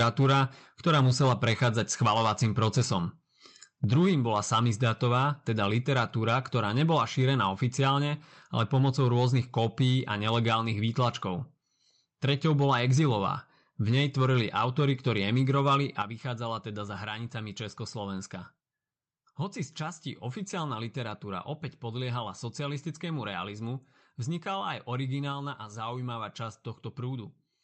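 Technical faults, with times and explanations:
0.00–2.93 s, 3.84–5.24 s, 5.75–7.91 s, 8.60–11.09 s, 12.24–13.11 s and 13.88–16.02 s: microphone overload. The input gain was likely set too high, pushing peaks about 7 dB past the converter's ceiling at first, then about 6 dB, and later about 3 dB. The flattened tops give the loudest syllables a harsh, crackling edge.
3.96 s and 16.02 s: microphone volume stepped down. The call software likely reacted to the clipping by lowering the device's input gain in single steps, first by about 3 dB and then by about 8 dB. Speech and background fall abruptly in level at each of those moments.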